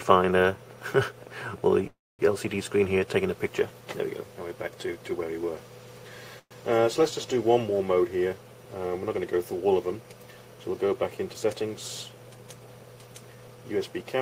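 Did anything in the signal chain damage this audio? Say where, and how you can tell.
Yes, on the network side: call audio freezes at 1.87–2.21 s and 6.39–6.53 s. Sound smears into a fading buzz, then silence, and resumes intact. The likely cause is a drained jitter buffer.

Then there's jitter buffer speed-up at 11.19–11.69 s and 12.09–12.39 s. Audio runs 9% and 12% fast at unchanged pitch as pitch periods get trimmed to shed the backlog.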